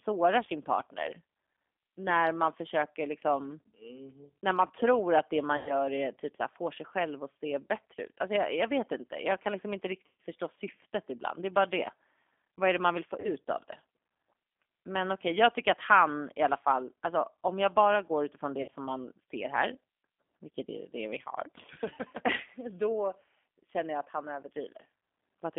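From start to finish the speech carries G.729 codec damage, and it is plainly audible. The codec rebuilds each 10 ms frame from a vocal tract filter, a pitch predictor and a few pulses, so the voice comes out rough and synthetic. The line band runs from about 250 Hz to 3.5 kHz, leaving the sound thin and muffled. The codec is the lighter G.729A variant, running at 8 kbit/s.

VoIP packet loss concealed by the speech codec strikes four times. At 5.57 to 5.76 s, after "man tror att det" and before "är typ så här", 100 ms of audio is lost. At 10.08 to 10.19 s, between "jag kan liksom inte" and "förstå syftet ibland", 120 ms goes missing. At 13.2 to 13.32 s, between "det man vill få" and "av det", 40 ms is lost. At 18.62 to 18.70 s, 60 ms is lost. Each time the decoder stretches its last pitch and filter with falling gain. The gap turns into a fading buzzy tone or coloured noise. Because each frame builds on the one before, the voice stays weak or distorted for a short while after the packets return.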